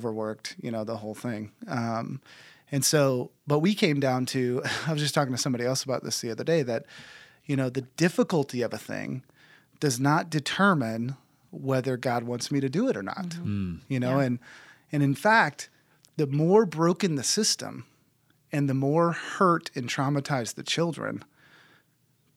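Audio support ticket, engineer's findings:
Nothing stood out on listening to the speech recording.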